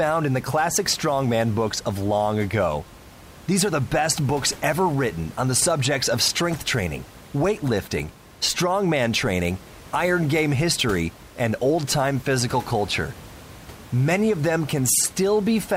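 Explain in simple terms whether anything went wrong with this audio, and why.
Nothing went wrong that I could hear in this recording: the faint background noise of the room sits well beneath the speech, and it comes from the space itself rather than from the equipment.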